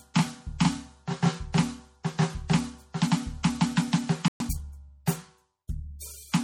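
The music carries MP3 compression damage from start to finish. It is plainly audible. The smeared, watery texture points to a low bitrate, which fits about 48 kbps. The likely cause is an encoder starving for bits, dropping weak frequency lines frame by frame.

At 4.28 s the music stops dead. The silence lasts 120 ms, until 4.40 s. This is a playback stall. The likely cause is the player running out of data or being blocked.

From 4.40 s to 4.64 s comes a time-compressed catch-up. The player trims its backlog by cutting and cross-fading small pieces. The music runs at 1.5 times speed. Pitch stays normal, but the passage sounds hurried.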